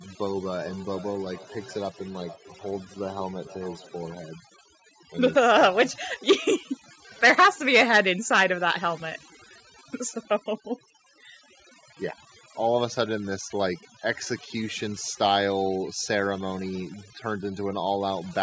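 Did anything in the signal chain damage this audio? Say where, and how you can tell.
Yes. Overdone noise removal in call processing, throughout: the suppressor drops bands near its noise estimate, leaving near-silent background with twinkling specks.

Feedback echo between two devices in call processing, 0.48 to 4.19 s: another device in the room replays the sound, which loops back roughly every 0.4 s at about 22 dB below the speech.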